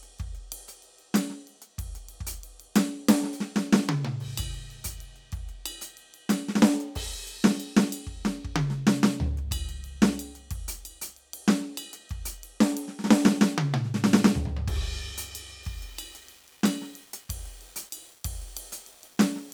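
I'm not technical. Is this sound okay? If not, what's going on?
No. From about 15.6 s to the end at 19.5 s, the music was most likely stored using too few steps of loudness, which fits 8 bits, and rounded off without dither, a low bit depth fault. That leaves a gritty, grainy roughness that follows the music, most obvious in quieter passages.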